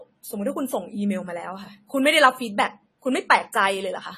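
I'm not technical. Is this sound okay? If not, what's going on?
No, not quite. The speech sounds dull and a bit smeared from start to finish, with a fizzy, watery edge on hissy sounds. That's most likely AAC compression squeezing the file hard, and it drops everything above about 14 kHz.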